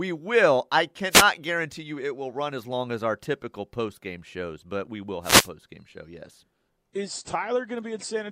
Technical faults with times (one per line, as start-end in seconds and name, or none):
1.10-1.25 wireless microphone noise hit
5.22-5.49 wireless microphone noise hit